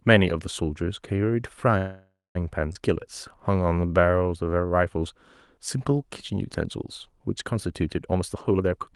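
From 1.77 to 2.37 s there is a call audio freeze, likely caused by packets held up in transit until the jitter buffer ran dry. The receiver stretches the last sound into a fading buzz or hiss that ends in about 0.21 s of silence, and speech resumes where it stopped, having gained a 577 ms gap.

At 2.73 to 2.77 s comes a skip ahead: with newer packets already queued, a stretch of roughly a fifth of a second was discarded, and playback jumps forward with only a 19 ms join, so part of the speech is simply gone.

Between 3.52 and 4.67 s a jitter buffer slow-down sets in as the receiver rebuilds its reserve by repeating single pitch periods over and over, adding 217 ms. Speech runs at 82% speed at unchanged pitch, with sounds drawn out.

From 8.08 to 8.89 s the opposite happens, a jitter buffer speed-up: holding too much audio, the receiver snips out short pitch-period pieces repeatedly, removing roughly 0.4 s. 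Speech plays at 145% speed at the same pitch and sounds noticeably hurried. Throughout, the call path's Opus coding keeps the top end capped near 12 kHz.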